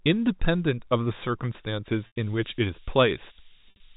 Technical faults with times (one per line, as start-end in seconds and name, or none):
1.93-3.96 low bit depth with noise shaping
2.07-2.16 packet loss with pitch repetition
3.68-3.80 packet loss with pitch repetition